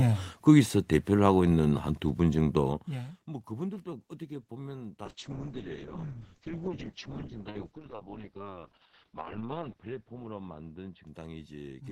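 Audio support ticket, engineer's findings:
Call bitrate drop from 5.06 s to end of clip: bandwidth estimate fell, Opus encoder starved to what sounds like roughly 6 kbps, held at the floor for about 4.5 s. Coarse coding, highs cut near 6 kHz. Speech turns rough, watery, muffled.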